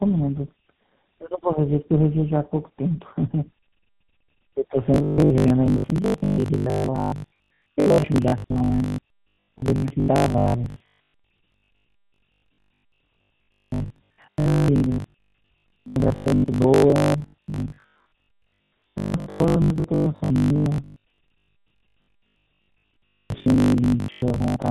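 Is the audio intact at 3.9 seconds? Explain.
No. At 3.9 seconds, as through the whole clip, the speech sounds rough, muffled and warbly. This is tandem speech coding. The signal passed through G.729A at 8 kbit/s, then G.711 mu-law at 64 kbit/s, then GSM full rate at 13 kbit/s. GSM full rate re-modelled audio that G.729A had already degraded, so the two low-rate speech coders' distortions stacked.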